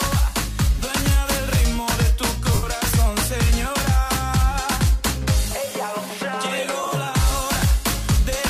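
The audio has two gaps from lost LE Audio frames. At 2.54 s about 90 ms drops out, and at 6.82 s shorter losses totalling 37.5 ms scatter over 60 ms, the longest run about 20 ms. The LC3 decoder fills each hole by repeating the last spectrum with random signs, so tones become a noisy smear that fades toward silence in the longer gap. On a spectrogram, harmonic lines blur into a grainy band; the waveform envelope holds, then sags.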